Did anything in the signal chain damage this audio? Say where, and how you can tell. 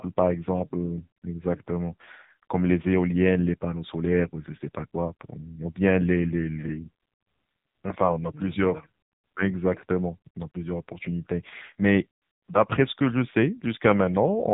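Yes, at the codec: heavy AMR narrowband mobile codec damage throughout. Nothing passes above 3.8 kHz, and the buzzy, synthetic, pulse-modelled speech fits a low rate near 6.7 kbps.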